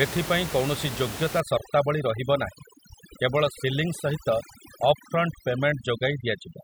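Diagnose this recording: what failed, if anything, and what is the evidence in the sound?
Overdone noise removal at the call-processing stage, from 1.40 s to the end. Over-aggressive suppression gates bands near the room-noise floor, leaving the background broken into twinkling specks.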